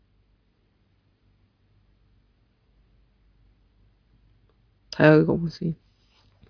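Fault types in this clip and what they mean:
No technical fault can be heard anywhere in the clip. Nothing in the sound points to a problem in how it was captured or carried.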